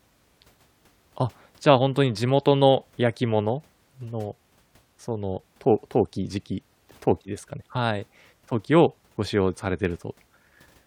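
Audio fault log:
No technical faults can be heard in the speech recording; the signal stays steady and intact throughout.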